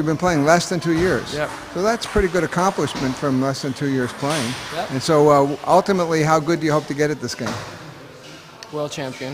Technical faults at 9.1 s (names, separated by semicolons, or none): sample clock jitter